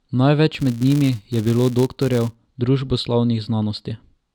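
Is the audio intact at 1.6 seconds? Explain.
No. The speech at 1.6 s falls inside a filter restarted on every block, running from 0.54 to 2.35 s. The filter loses its state at each block boundary and restarts from silence. Each restart leaves a small transient, heard as a 200 Hz buzz that follows the speech level.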